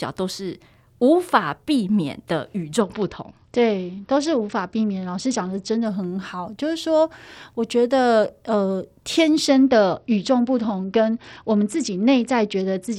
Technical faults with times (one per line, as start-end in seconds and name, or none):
2.81-5.85 Bluetooth SBC bit pool drop
9.48-12.99 Bluetooth SBC bit pool drop